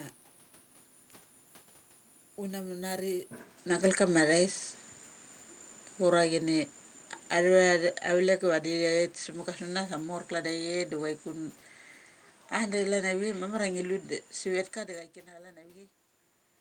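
At 3.38 s the system likely switched its input to a poorer device, so from there to the end nothing passes above 9.1 kHz and a faint new noise floor appears, with no gap or level jump. From 6.0 to 9.09 s the automatic gain was falling, easing the level down by about 6 dB, so the voice and its background sink together.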